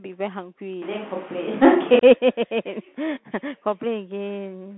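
Throughout, the audio passes through a Bluetooth CVSD headset codec, whose coarse one-bit slope coding fits a 64 kbps link. Nothing above 3.8 kHz survives, and sibilants sound scratchy over a granular hiss. From 0.82 to 1.99 s there is likely a switch to a distant microphone. The speech turns roomy and hollow at a similar level, with faint room noise well below it, then abruptly returns.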